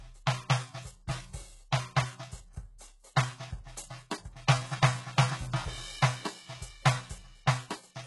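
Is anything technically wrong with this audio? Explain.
Yes, the music carries heavy HE-AAC compression damage throughout. The treble, empty above 11.5 kHz, is likely rebuilt by spectral band replication from copied lower bands, leaving gritty, metallic highs that fit a very low bitrate.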